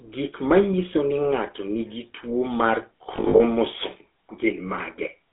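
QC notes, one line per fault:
throughout: GSM full-rate codec. The speech has a buzzy, gravelly roughness and is confined to about 300 Hz to 3.5 kHz. The codec models the vocal tract and rebuilds the excitation from sparse regular pulses. The damage is plainly audible and fits 13 kbps GSM full rate.
3.16 to 3.41 s: lost GSM frames. About 160 ms of sound is missing, scattered over 240 ms, with the longest gap near 70 ms. Each gap is filled by repeating the last good frame. That repetition produces a rough, metallic ring, which points to roughly eight lost frames.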